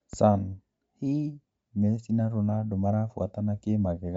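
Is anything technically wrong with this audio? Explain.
Yes. Throughout the speech there is plainly audible codec damage, most likely Bluetooth LC3 compression. Nothing is present above 7.8 kHz, so the band stops abruptly and the top end sounds dull. LC3 transforms short blocks of audio and, at modest bitrates, discards upper spectral detail and fills the gaps with synthetic noise. That gives the voice a breathy, grainy edge, consistent with roughly 32 kbps at 10 ms frames.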